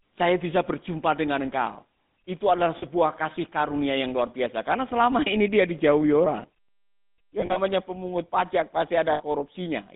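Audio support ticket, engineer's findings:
Whole clip: buzzy, gravelly roughness on the speech, plainly audible, band limited to roughly 150 Hz–3.7 kHz. Probable component: GSM full-rate codec, consistent with 13 kbps. Mechanism: vocal-tract model excited by a sparse, regularly spaced pulse train (one excitation sample in three kept). The coarse excitation produces the grit, and nothing above 4 kHz is passed.

2.78–2.84 s: brief metallic ring after "dengan engkau itu adalah", before "kasih karunia yang luar". 7.40–7.57 s: repeated ringing before "pemungut pajak", about 100 ms lost, scattered over 160 ms, longest gap around 40 ms. 9.12–9.22 s: 80 ms held ring. Probable component: lost GSM frames. Mechanism: concealment repeats the last good frame's parameters at falling level.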